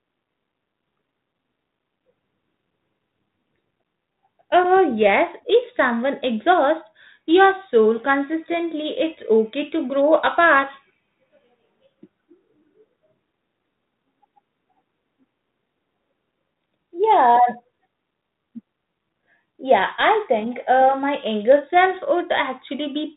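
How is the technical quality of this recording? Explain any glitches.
No glitches can be heard.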